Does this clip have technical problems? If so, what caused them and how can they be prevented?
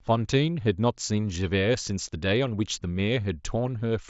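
No, there are no technical problems in this speech.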